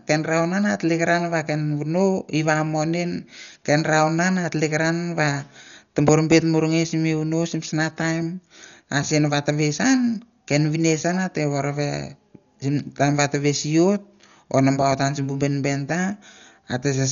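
Dolby Digital compression runs throughout the speech, likely from an AC-3 encode at a starved rate that fits about 48 kbps. Nothing sounds above 6.9 kHz. Many frequency lines get no mantissa bits and are refilled with dither noise, leaving heavy, dull, rough fluttering around tones.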